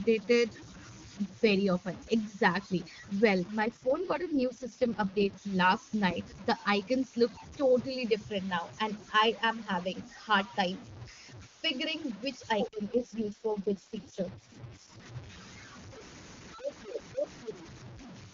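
Throughout the speech there is a grainy, gritty distortion that moves with the sound. Quiet passages sputter rather than fade smoothly. The error sits roughly 20 dB below the signal. The likely cause is low bit depth without dither, with truncation to about six bits.

From 3.60 to 5.34 s, just before "last night", the voice turns rough and synthetic. This is an AMR rate drop. The wideband codec falls from its clear high rate to the lowest, about 6.6 kbit/s. Bandwidth stays the same and nothing cuts out.

From 12.76 to 15.06 s, right after "figuring which", the same rate drop returns with the same raspy, artificial quality.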